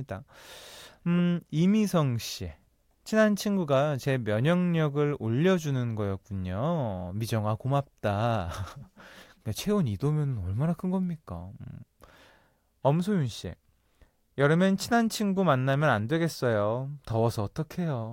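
No technical faults can be heard in this speech recording. Nothing in it calls for a timestamp or further comment.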